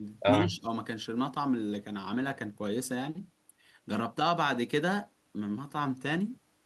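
Speech clip with one short dropout near the start: between 0.43 and 0.65 s the talker's level sags by a few decibels, roughly 5 dB at its deepest, for about a fifth of a second, then recovers. That's likely speech suppressed in double talk, where the echo canceller heard both sides at once, couldn't tell this talker from loudspeaker echo, and ducked everything. The top end stops around 12 kHz, which fits an Opus call codec.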